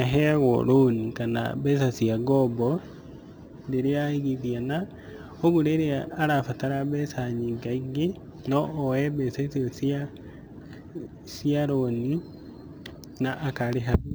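Throughout the speech there is imaging from sample-and-hold upsampling. Each sample was repeated to fill the higher rate with no smoothing filter, so a mirrored copy of the spectrum sits from 12 kHz to 24 kHz, about 30 dB below the speech, which points to audio at 24 kHz raised to 44.1 kHz. It is heard as a bright, metallic fizz that rises and falls with the speech. The image's lowest part moves opposite to the pitch.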